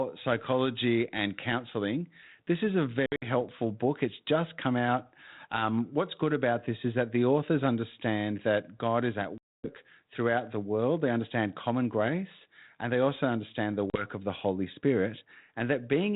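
Packet loss on an ADPCM call cuts hard-edged silent holes at 3.06 s (scattered), 9.38 s (about 260 ms) and 13.9 s. Each time, the decoder's adaptive prediction drifts from the sender's, so the sound returns slightly distorted before settling.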